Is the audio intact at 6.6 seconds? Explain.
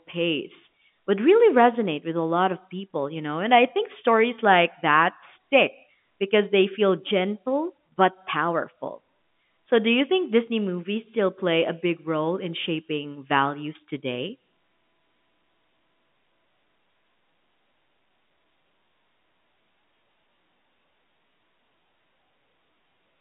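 Yes, the audio is intact at 6.6 seconds: the speech there carries only the ordinary narrow telephone band of G.711 A-law coding, with nothing above about 3.8 kHz, and no fault at that moment.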